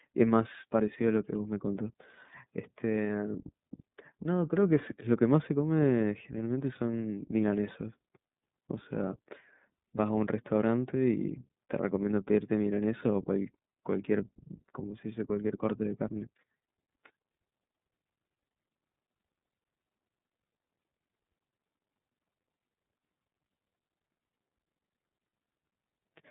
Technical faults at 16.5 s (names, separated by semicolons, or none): iLBC codec